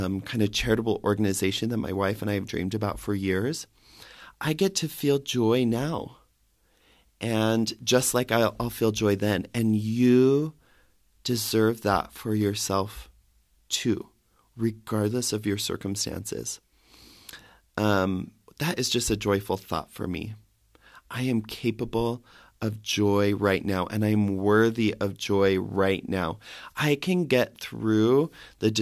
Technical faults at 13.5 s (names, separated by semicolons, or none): none